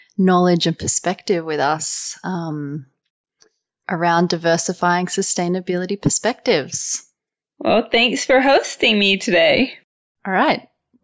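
No technical faults occur in this speech recording, so there is nothing to describe in time order.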